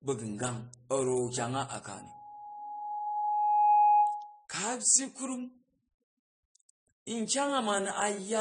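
A speech recording in which the whole band stops at 10 kHz and two kinds of coding artefacts sit on top of each other: the artefacts of one codec combined with those of another. This layering is what separates likely transcoding between lossy codecs from a single low-bitrate encode, and the character fits an MP3 stage followed by AAC-LC, both near 40 kbit/s. From 1.97 to 4.46 s a loudspeaker feedback squeal appears: a single 833 Hz tone swells over roughly two seconds to about 10 dB above the speech, then stops. The slow growth on one pitch separates it from a steady whistle or hum.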